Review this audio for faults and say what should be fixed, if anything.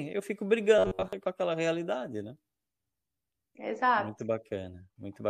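From 0.79 to 1.13 s the speech collapses into robotic sound from repeated short buffers: a rigid, metallic buzz pitched at 93.8 Hz that only loosely tracks the talking. That pitch means a chunk of roughly 10.7 ms is being looped, and most of the real audio in that stretch gets skipped. The likely cause is new audio not reaching the playback side in time, so the software keeps replaying its last buffer. To prevent it, give the input or network path a deeper jitter buffer.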